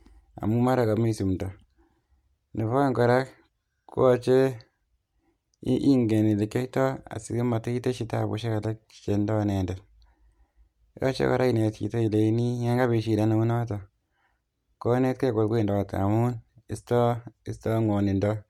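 At 9.53 s a tiny gap in the sample stream, likely a couple of dropped samples, makes the speech waveform jump abruptly from one value to a later one. Far too brief to remove any sound, it is heard as a single sharp click.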